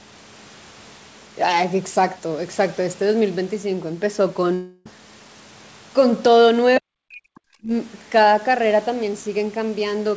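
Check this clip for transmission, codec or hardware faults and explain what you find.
Two faults stand out in this speech, which is band-limited to 8 kHz throughout, consistent with a wideband call codec.

From 4.54 to 4.87 s the sound smears into a fading buzz for about 0.31 s, then resumes with roughly 0.32 s gone. This is likely a long network dropout, with the receiver concealing the gap.

From 6.79 to 7.73 s the speech dips sharply, falling very deep at its lowest. This is likely speech suppressed in double talk, where the echo canceller attenuated its own talker along with the loudspeaker echo.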